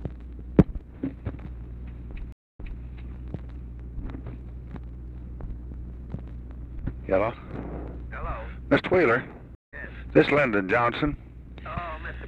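Two stream reconnects in this audio: at 2.32 to 2.82 s it drops out for 260 ms and comes back 232 ms earlier, repeating a bit, and at 9.55 to 9.74 s a 175 ms gap resumes roughly 150 ms later, skipping ahead, as the player reconnects and restarts decoding mid-stream.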